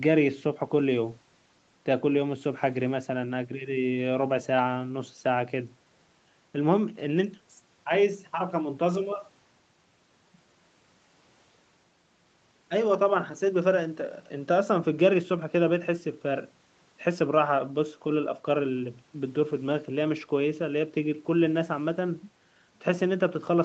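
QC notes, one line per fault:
Nothing stood out on listening to this speech clip.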